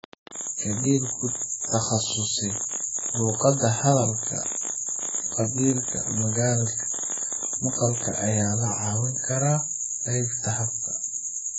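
Across the whole recording the speech sounds dull and smeared, with a fizzy, warbling edge on sibilants and nothing above about 7.7 kHz. This is heavy AAC compression damage, likely AAC-LC at a very low bitrate near 12 kbps, discarding high frequencies and coarsely quantising the rest.

From 0.04 s to 8.28 s a train of clicks ticks over the speech and through the pauses, roughly a hundred similar pops at an uneven pace of about 14 per second, some peaking a few decibels above the speech. The likely cause is interference or a faulty connection injecting pulses into the signal.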